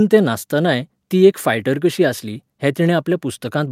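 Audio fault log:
No faults detected.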